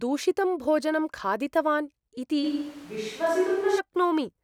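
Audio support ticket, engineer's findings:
Speech turns abruptly roomy and hollow at 2.45 s, bass thinned, returning to close sound at 3.78 s. Level roughly unchanged. Background noise rises to about 25 dB below speech. Likely switch to a distant microphone after the close mic dropped out.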